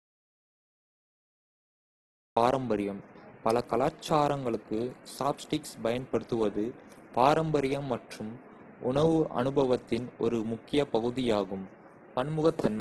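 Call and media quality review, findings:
Dropout to silence from 0.00 to 2.37 s, already under way at the start. Silent, no room tone. Likely input link lost while recording continued.

Grainy, rough speech throughout, nothing above 12.2 kHz. Likely Opus compression in CELT music mode, bands noise-filled when bits ran short, fitting a stream near 12 kbps.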